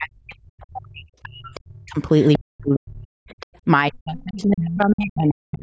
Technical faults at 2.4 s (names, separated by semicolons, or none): speech suppressed in double talk; other side's voice leaking through